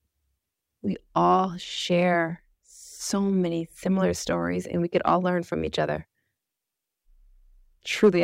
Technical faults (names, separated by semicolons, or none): clock drift buffer slips